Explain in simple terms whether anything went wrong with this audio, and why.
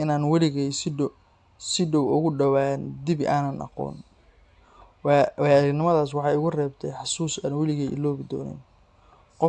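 Nothing went wrong with this speech recording.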